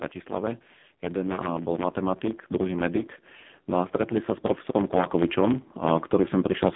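From start to finish the speech carries a block size mismatch (truncated). One stage writes longer blocks than the next reads, so the tail of every block is discarded. This produces a steady buzz at about 92 Hz, the rate at which the cut points arrive, and the whole clip runs about 1.07 times fast while the pitch stays near normal. The buzz rate fits a 512-sample block being read short.

Also present for the whole clip is the AMR narrowband mobile codec, AMR-NB. The line band sits between roughly 150 Hz and 3.6 kHz, and nothing reaches above 3.8 kHz, so the sound is thin and muffled. The codec rebuilds the voice from a vocal-tract model excited by a handful of pulses per frame. The damage here is heavy, and the speech comes out buzzy and synthetic, which points to a very low bitrate mode of around 5.9 kbps. The lowest bass is also trimmed by the call's microphone processing, which is normal.

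From 3.71 s to 6.7 s there is automatic gain rising. The gain control judged the input too quiet and raised its level gradually by about 5 dB. Voice and background swell together over those three seconds instead of holding a steady level.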